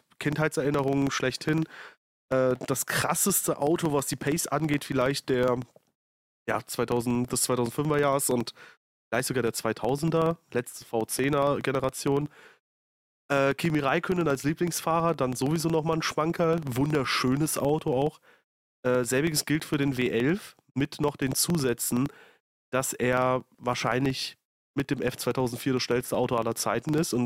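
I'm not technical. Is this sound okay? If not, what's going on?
No. The problem is a filter restarted on every block. The software handles the speech in small chunks, about 21.5 per second, which fits a block of 2048 samples. Between chunks, a filter in the chain forgets where it was and starts each chunk from silence. Every restart leaves a tiny click at the start of the chunk. Those clicks run through the whole clip as a low, steady buzz of about 21.5 ticks per second, louder when the speech is louder.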